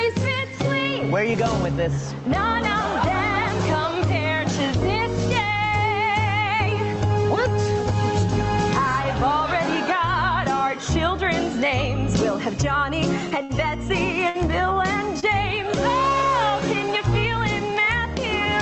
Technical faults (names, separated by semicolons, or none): gain pumping; short stall from a late packet